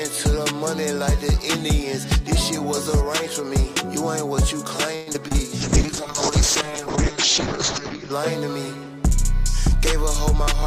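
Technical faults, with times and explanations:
4.95–5.36 s, repeated packet loss (robotic sound): Over this 0.4 s stretch, short holes follow one another. About 164 ms is patched by stretching the preceding sound, across roughly 41% of the span, the longest gap 113 ms. Another 60 ms simply drops out. The broken, stuttering rhythm separates it from a bitrate drop, whose degradation is continuous and smooth rather than chopped.
5.61–8.18 s, call bitrate drop: Just after the choppy patch, the sound turns rough and watery, and everything above 8 kHz disappears where content reached 20 kHz before. That fits the encoder being squeezed from around 128 kbps to about 6 kbps, holding the lowest rate for nearly 2.5 s. Unlike packet loss, nothing goes missing or repeats. The audio stays continuous but coarse and muffled until the rate recovers.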